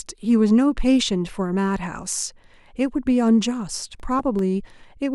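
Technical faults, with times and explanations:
3.80–4.39 s CD scratch ticks: four tiny ticks, about five a second, one per disc revolution where unreadable samples were patched; thin vertical spectrogram lines, small waveform notches.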